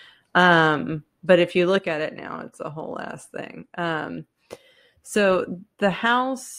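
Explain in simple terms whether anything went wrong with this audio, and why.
At 1.79 s the speech abruptly becomes quieter and stays that way to the end, likely one channel dropping out. A fade would slide down gradually; this is a sudden step.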